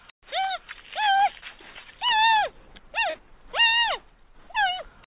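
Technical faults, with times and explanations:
0.00–2.09 s, pre-emphasis left on: thin, bright, hissy sound, because a treble boost of about 11 dB at 10 kHz relative to 1 kHz was never undone.
1.40–1.44 s and 3.10–3.16 s, short concealed packet loss: brief smears or wobbles where about 20 ms, then 40 ms, of audio went missing and the decoder extrapolated the preceding sound to fill them.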